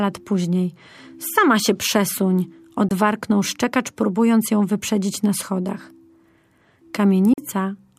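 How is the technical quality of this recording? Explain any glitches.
The speech has two brief silent gaps, most likely Bluetooth dropouts. The first, at 2.89 s between "się przesuń" and "szczekacz próbując ją wyprzedzić", lasts about 21 ms. The second, at 7.33 s, lasts about 43 ms, which fits one and then two undelivered packets. The sound then resumes as though it had kept playing. On a waveform each gap is a flat stretch, and on a spectrogram it is a narrow vertical blank across all frequencies.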